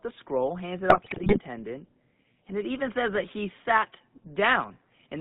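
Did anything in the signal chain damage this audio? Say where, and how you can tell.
Yes, at the codec stage, for the whole clip. The sound has the buzzy, gravelly roughness of the GSM full-rate codec, which fits a 13 kbps GSM stream. The codec models the vocal tract and excites it with a sparse, regularly spaced pulse train, so fine detail in the excitation is lost and the voice takes on that coarse, rasping texture. The band is confined to about 150 Hz to 3.7 kHz, and the damage is plainly audible throughout.

The network or radio link also damaged the audio, with GSM bit errors from 0.90 to 1.40 s, right after "the scroll hands it". For about half a second the speech breaks into squawks, pops and gargling. This points to a few percent of bits being corrupted across a couple of dozen consecutive frames. Flipped bits in the filter, pitch or gain parameters make the decoder distort the spectrum or spike the level frame by frame, which produces those erratic bursts.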